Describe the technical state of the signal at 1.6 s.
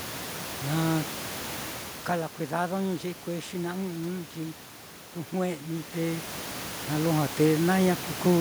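At 1.6 s the signal is intact, with no system fault; the change in level there comes from the talker moving relative to the microphone, heard over room noise about 13 dB below the speech.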